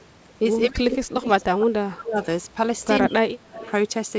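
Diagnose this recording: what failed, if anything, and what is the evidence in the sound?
From 0.66 to 2.19 s and again from 3.03 to 3.6 s, the speech sinks by roughly 30 and 25 dB. This is likely speech suppressed in double talk, with the call's echo canceller attenuating the near talker while the far side spoke.

A faint delayed copy of the speech, about 20 dB down and 158 ms late, surfaces at 3.01 to 3.05 s and 3.59 to 3.71 s. This is likely an echo leak, with loudspeaker pickup escaping the far end's echo canceller.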